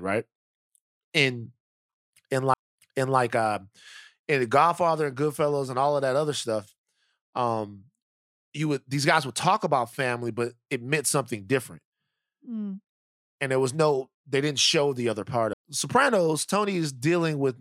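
A brief tick in the speech at 2.54 s and again at 15.53 s marks a CD skip, where each time the sound mutes for only a few milliseconds and resumes from a different point, as the laser jumped to another turn of the disc's spiral.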